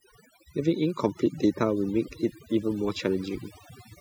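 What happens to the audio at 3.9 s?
At 3.9 s the speech still carries overdone noise removal, which runs through the whole clip. The noise reduction was set too strong. Frequency bands near its noise estimate are pulled far down. The background drops and breaks up into twinkling specks.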